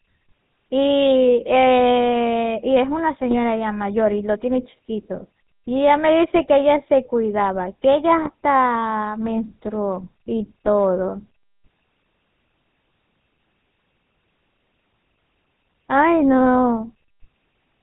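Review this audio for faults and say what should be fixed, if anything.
GSM full-rate codec coloring runs throughout: a buzzy, gravelly roughness with nothing above 4 kHz, from pulse-driven vocal-tract modeling consistent with 13 kbps full-rate coding. It is steady rather than bursty. Prevent it by using a wideband codec.

GSM bit errors cause brief squawks and gargling at 3.29–3.35, 6.37–6.43, 8.22–8.28 and 10.66–10.73 s, where corrupted filter, pitch or gain values distort whole frames. They are sudden bursts, unlike the constant codec buzz. Prevent them with a stronger link and better error protection.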